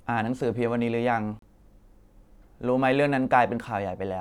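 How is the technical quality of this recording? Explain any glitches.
The speech drops to silence at 1.39 s and comes back at 1.43 s, a hole of 32 ms. This is a digital broadcast dropout: the receiver muted for a corrupted or missing frame, and the gap's length points to a single lost frame. Whatever was transmitted in that interval is simply absent.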